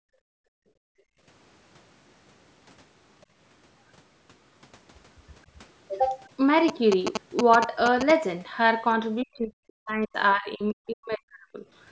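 From 0 to 1.24 s, the room sound dips and drops out, at its deepest by about 36 dB. This is background gated by the echo canceller. The loudspeaker was playing, and the canceller pulled the microphone down hard until it released.

From 3.21 to 3.26 s, a brief, very faint scrap of a second voice sits far below the main speech. It is the other side's voice leaking through. The likely cause is loudspeaker sound the echo canceller failed to remove from the microphone.

From 6.68 to 8.11 s, a galloping dit-dit-dit of short buzzes at 217 Hz appears, about as loud as the speech. These are GSM signalling bursts. A nearby 2G phone sent short groups of radio bursts, and the audio circuit rectified them.

From 9.23 to 10.18 s and again from 10.34 to 11.64 s, the talker's voice dips very deeply. This is speech suppressed in double talk. Likely both sides spoke at once, and the echo canceller, unable to separate the talker from the loudspeaker echo, turned both down.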